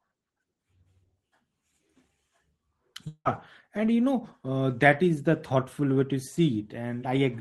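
Speech, carried over a WebRTC call path whose Opus coding limits it to about 12 kHz. From 3.07 to 3.28 s the sound smears into a fading buzz, drops to roughly 60 ms of silence, then resumes with about 180 ms missing, likely a long network dropout.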